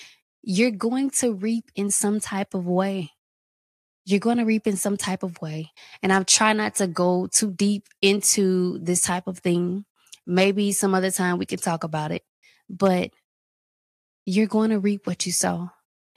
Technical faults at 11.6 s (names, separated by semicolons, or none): none